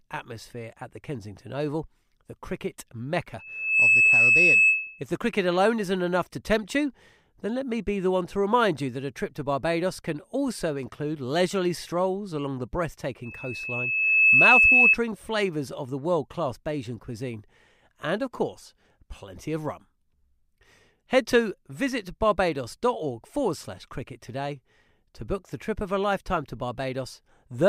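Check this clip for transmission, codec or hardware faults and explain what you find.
Loudspeaker feedback squeal occurs twice, from 3.38 to 5.05 s and from 13.23 to 14.98 s. The microphone picked up its own loudspeaker, and the loop gain exceeded one at 2.6 kHz. That tone swells into a squeal, within half a second the first time and over about a second the second, peaking around 10 dB above the speech.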